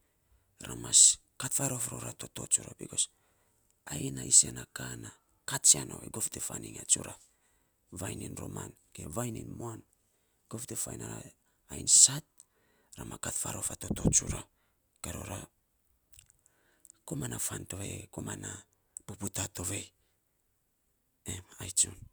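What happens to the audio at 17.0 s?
Nothing happens at 17.0 s: the speech continues intact through that moment, with no dropout, click or other fault.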